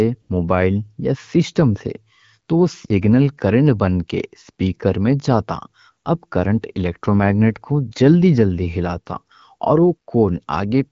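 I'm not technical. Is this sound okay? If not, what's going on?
No. From 0.21 to 0.29 s, just before "موبائل یا سسٹم سے", there is AMR comfort noise: the phone judged the talker silent for 80 ms, and the receiver filled the gap with a smooth, artificial hiss instead of the real background, carried over the HD Voice wideband call.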